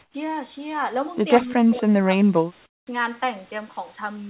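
From 0.02 to 0.14 s the background becomes comfort noise in place of the background. It is a steady, featureless hiss about 12 dB quieter, likely from discontinuous transmission. On a spectrogram it appears as a smooth, uniform band with no texture.

At 1.68–1.87 s and again at 2.04–2.09 s, speech suppressed in double talk pulls the speech down by roughly 20 dB and then 15 dB, likely the echo canceller reacting to both sides talking. The waveform shows sudden notches in the envelope.

From 2.66 to 2.87 s the comfort noise returns, now about 24 dB below the real background. It shows as a flat, sharply lowered stretch in the waveform.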